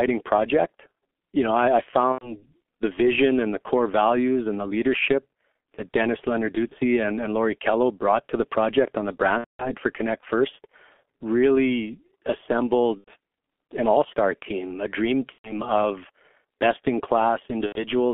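The G.723.1 codec colours the speech from the first second to the last. The line passes only about 250 Hz to 3.5 kHz, and at 6.3 kbit/s the coder rebuilds each 30 ms frame from a coarse, slowly updated model of the voice. The result is heavily damaged: muffled, hoarse speech whose consonants smear into one another, with the low warmth and upper brightness both gone.

VoIP packet loss concealed by the speech codec breaks in six times: 2.12 to 2.43 s, 6.68 to 6.75 s just before "and and", 9.38 to 9.72 s right after "the project on the", 12.98 to 13.11 s, 15.32 to 15.58 s between "star team a dream" and "of best in", and 17.66 to 17.84 s. With each gap the decoder keeps repeating its last pitch and filter at falling gain, so the speech stretches into a buzzy tone or coloured noise that fades. The shortest gap fits a single lost 30 ms frame, and the longest, at 9.38 s, points to roughly seven frames. 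The voice stays thin for a moment after each gap while the decoder catches up.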